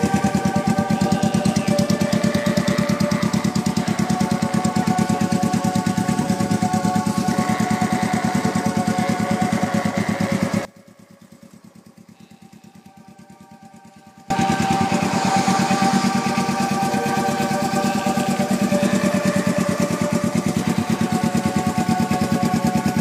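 From 10.65 to 14.30 s the sound drops by about 26 dB and turns faint and distant, as if only its edges remain. This is most likely one channel inverted: reversed polarity on one side cancels the shared centre content when the channels are summed to mono.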